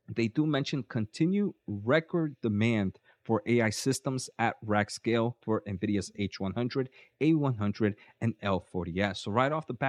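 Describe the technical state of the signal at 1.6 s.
At 1.6 s the speech signal is intact, with no audible dropout, clipping, distortion or other fault at that point.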